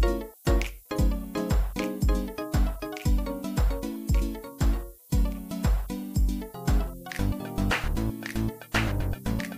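From start to end, low bit depth with noise shaping adds a thin, steady hiss rising toward the top, which fits 8-bit quantisation. It sits about 25 dB below the sound.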